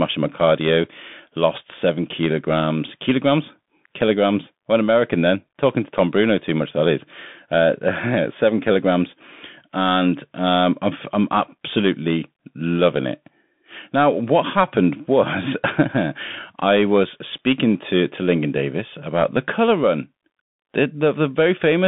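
From start to finish the speech runs through a Bluetooth CVSD headset codec, the narrowband link headsets fall back to. It sends just one bit per sample saying up or down, with an adapting step size, and the sound fits a 64 kbps stream. Everything sits between about 150 Hz and 3.6 kHz, with nothing above 3.8 kHz, so it sounds boxed in. The coding damage is plainly audible: s sounds go scratchy, loud bright moments break up, and a grainy hiss rides underneath.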